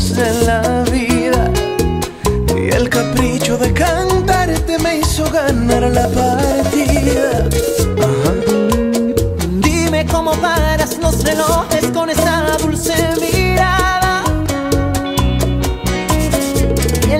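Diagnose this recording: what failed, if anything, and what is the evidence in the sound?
Nothing failed; no faults heard.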